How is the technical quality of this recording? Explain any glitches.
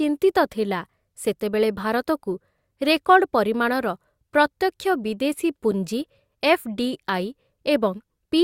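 The recording has one brief technical glitch, a gap between stream segments at 5.71 s. Two consecutive segments' time stamps leave about 5.5 ms uncovered, with the stream cut into 6-second segments, and the player fills the hole with silence. The speech drops out with a hard-edged tick, and no audio is lost. A waveform shows a flat notch, and a spectrogram shows a thin vertical blank stripe.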